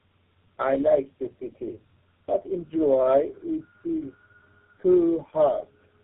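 Right from the start and all the way through, the speech carries tandem speech coding: it sounds like three low-rate speech codecs stacked in a row, each re-coding the last one's damage, so it's rough, muffled and warbly, with nothing above 3.8 kHz.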